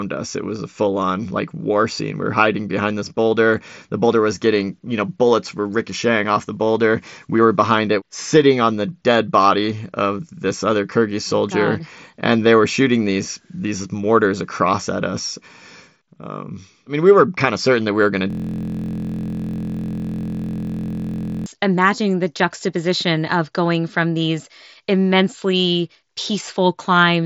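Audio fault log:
18.30–21.46 s, system hang loop: a 23.22 ms slice, fitting a 1024-sample buffer, repeats exactly while the system stalls, producing a steady 43.1 Hz buzz.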